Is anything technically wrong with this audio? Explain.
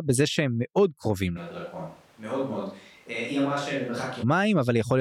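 Yes. Between 1.39 s and 4.22 s the speech suddenly turns roomy and hollow, a few decibels quieter, thinner in the bass and with more audible room noise. The likely cause is a switch to a distant microphone: the close microphone drops out, then returns just as abruptly.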